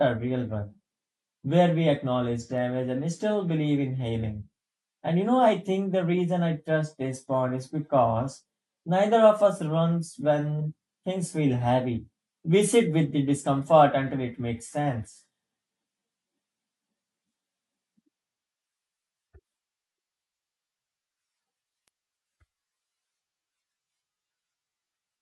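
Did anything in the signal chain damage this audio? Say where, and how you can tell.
Yes. Bit error spikes at 2.58 s and 21.88 s, from storage or a digital link: a single flipped bit makes one sharp tick, a lone vertical line on a spectrogram.

AAC frame loss with concealment at about 10.60 s, in the codec or network stage: roughly 43 ms of audio is rebuilt from the previous spectrum, giving a brief smeared, phasey blur.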